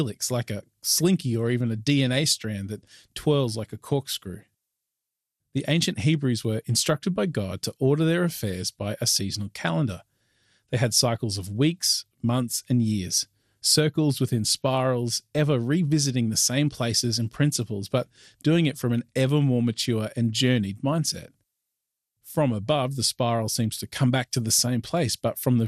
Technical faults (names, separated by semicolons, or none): MP2 compression